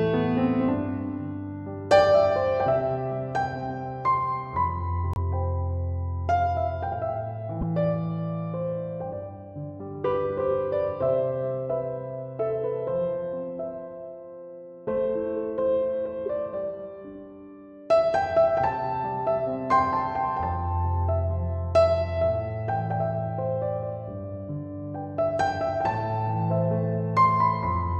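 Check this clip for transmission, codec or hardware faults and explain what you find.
Two brief codec faults stand out, both corrupt frames that were decoded anyway. From 5.14 to 5.17 s, and again from 7.61 to 7.63 s, damaged bits inside compressed frames were read as wrong gains or codes, so the decoder placed energy at incorrect frequencies. Each is heard as a short chirp or burst of noise peaking around -15 dBFS. The first fits roughly one damaged frame and the second roughly two. On a spectrogram, each shows as a narrow vertical smear of misplaced energy, and on the waveform as a sudden jagged blip.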